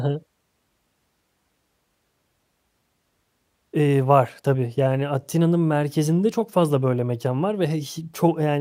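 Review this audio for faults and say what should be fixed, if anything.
Nothing needs fixing: the speech signal shows no audible technical faults anywhere in the recording.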